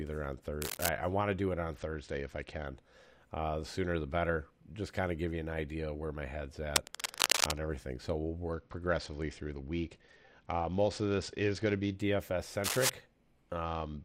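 At 0.62 to 0.89 s a burst of cable scratch noise sits over the speech, dense and irregular, roughly as loud as the speech itself. It is likely a worn connector or cable shifting and making intermittent contact. From 1.75 to 2.67 s the treble dulls and a gritty grain appears. This is a Bluetooth SBC bit pool drop: the encoder starved its upper sub-bands and quantised the rest coarsely, which fits the bit pool falling from 28 to 9, near 78 kbps. Between 6.76 and 7.54 s the scratching returns, longer and somewhat louder than the speech. A second, longer bit pool drop runs from 8.53 to 11.96 s with the same muffled, gritty character. Another short scratch burst follows at 12.64 to 12.90 s, at about speech level. The final bit pool drop starts at 13.65 s and lasts until the clip ends.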